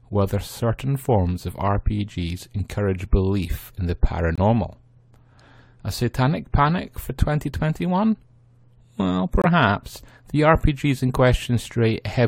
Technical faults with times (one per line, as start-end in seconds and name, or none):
4.35-4.39 corrupt frame muted
9.42-9.46 corrupt frame muted